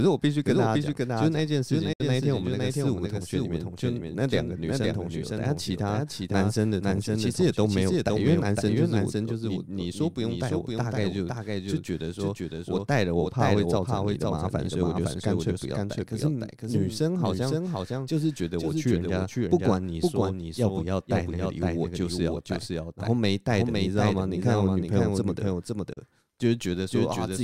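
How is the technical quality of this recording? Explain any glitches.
The recording has two problems: a doubled audio track throughout and two short digital broadcast dropouts.

The doubled audio track runs the whole length of the clip. A second full-band copy of the speech trails the original by about half a second, roughly 5 dB quieter. It has no reverb tail or room colour, so it sounds like a flat, clean repeat rather than an echo. The likely cause is the same signal being captured again through a slower path and mixed back in.

The first digital broadcast dropout is at 1.93 to 2.01 s. The second is at 25.93 to 25.98 s. In each, the sound fades out over about 8 ms, goes silent, then returns. The receiver lost valid data and muted until good frames arrived. The first gap loses about 64 ms of audio and the second about 32 ms, which fits one or two missing frames of roughly 32 ms each. 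Whatever was sent during those gaps is gone.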